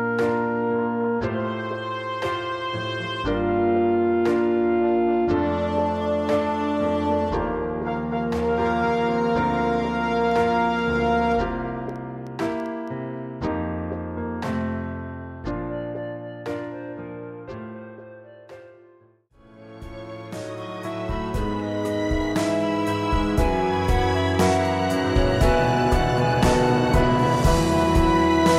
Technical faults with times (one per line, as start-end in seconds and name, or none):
10.31-12.89 train of clicks